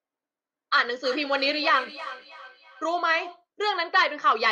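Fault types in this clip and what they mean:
Feedback echo between two devices: a second device in the same room plays back this microphone's signal, which gets picked up again, and neither echo canceller removes the other's output. From 1.03 to 3.45 s each stretch of speech returns about a third of a second later, thinner and ringing, peaking about 15 dB below the direct speech. On a waveform and spectrogram, fainter copies of each burst trail it at that fixed spacing.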